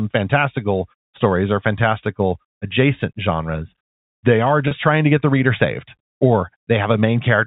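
A speech clip carried over G.711 telephone coding, with everything above 4 kHz gone. At 4.68 to 4.71 s, just before "trying to get the", about 30 ms of audio is lost to packet loss with pitch repetition, a gap that fits three 10 ms packets. The receiver filled it by looping the last pitch period, so the sound briefly holds on a slightly buzzy, frozen tone. A plain dropout would instead leave silence or a click at that point.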